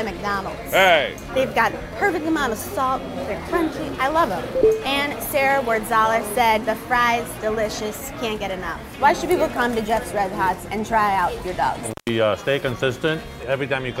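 The audio has an intermittent contact fault from 11.91 to 12.09 s: a loose connection opens for about 136 ms, cutting the sound out with crackle at each edge.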